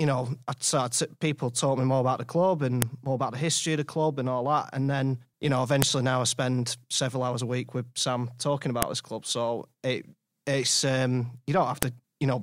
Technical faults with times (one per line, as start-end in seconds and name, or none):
2.82 file header played as audio
5.82 file header played as audio
8.82 file header played as audio
11.83 file header played as audio